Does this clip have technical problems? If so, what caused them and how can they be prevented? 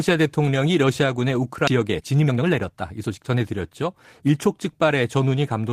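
Yes. A skip ahead at 1.67 to 1.69 s drops roughly a second of speech, the two sides joined with no filled gap. Unlike a dropout, there is no silence or concealment, just an abrupt jump. Sizing the jitter buffer for its peak arrival burst would prevent it.

From 1.70 to 4.34 s a jitter buffer speed-up runs the speech at 114% by cutting out short pitch-period pieces, about 0.4 s in total, to shrink the built-up delay. The pitch stays put, which separates it from resampling. Smoother, slower buffer drain would prevent it.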